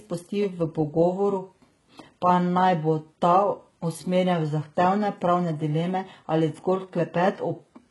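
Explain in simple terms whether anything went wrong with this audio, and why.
Something did go wrong: from start to finish the speech has a heavily processed, grainy quality, most likely from HE-AAC compression at a very low data rate. This codec stores only the lower part of the sound and fakes the upper part by copying it upward. The hiss of s sounds stays bright but turns gritty and metallic, and nothing exists above about 11.5 kHz. That fake, glassy treble distinguishes it from ordinary muffling, which just sounds dull.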